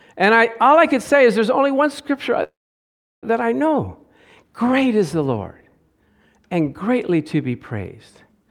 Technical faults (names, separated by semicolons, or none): call audio freeze